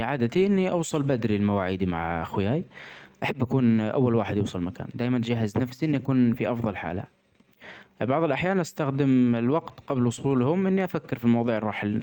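Nothing stood out on listening to this speech recording.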